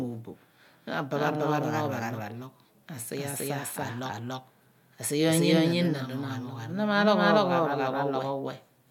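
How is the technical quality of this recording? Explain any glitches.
The recording has one fault, present for its whole length: a doubled audio track. A second, full-band copy of the speech trails by roughly 300 ms at about equal level, likely from a slower duplicate capture path.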